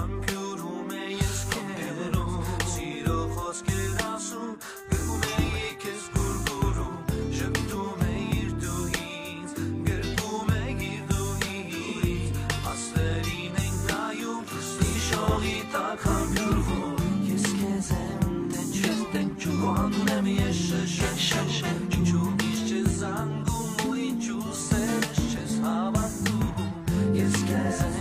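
No technical faults can be heard anywhere in the audio.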